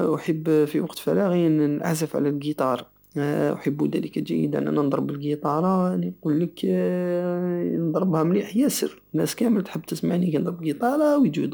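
Speech, with video or display buzz running underneath it throughout: a rasping 50 Hz buzz at the picture's field rate, topped with hash and a thin whine at 15.6 kHz, the line rate. Together they sit roughly 35 dB below the speech. A screen or video cable is coupling its scanning signals into the audio path. Plain 50 Hz mains hum would sound smoother and carry no 15.6 kHz line tone, so that whine marks the video source.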